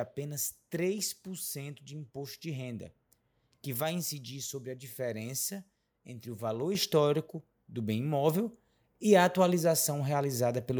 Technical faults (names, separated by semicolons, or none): microphone volume stepped up